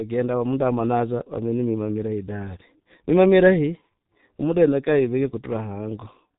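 From start to finish the speech carries heavy G.723.1 codec damage: nothing above 3.8 kHz, a muffled, hoarse tone and smeared consonants, consistent with a bitrate near 6 kbit/s.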